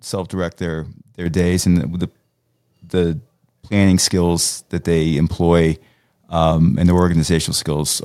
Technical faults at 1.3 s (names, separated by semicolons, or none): microphone volume stepped up